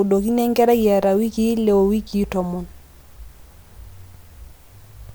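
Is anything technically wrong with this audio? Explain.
No, nothing technically wrong can be heard here.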